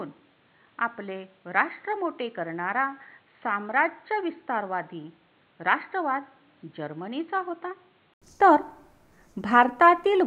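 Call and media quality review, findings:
Dull, boxy band-limited sound 0.0–8.22 s, nothing above 4.3 kHz, level about 10 dB lower, noise floor roughly 35 dB down; 80 ms gap, then full-band audio. Likely input switched to a poorer device, such as a headset call profile.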